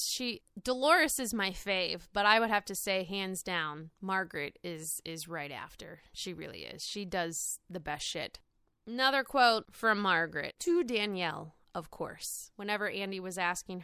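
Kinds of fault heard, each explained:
No technical faults are audible.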